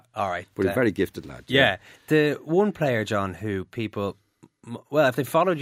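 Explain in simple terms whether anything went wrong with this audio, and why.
Nothing went wrong here.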